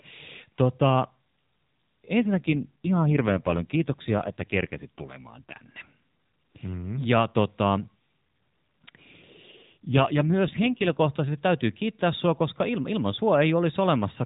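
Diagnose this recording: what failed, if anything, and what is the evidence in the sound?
An AMR rate drop, at the network and codec stage. From 2.20 to 5.57 s and 9.52 to 11.01 s, before "täytyy kiittää sinua koska", speech turns rougher and more synthetic. The band is unchanged, with no gap. This fits a weak link pushing 12.2 kbps down to about 5.9 kbps.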